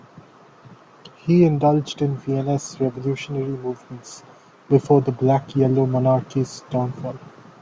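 No technical faults occur at any point in the speech, so there is nothing to describe in time order.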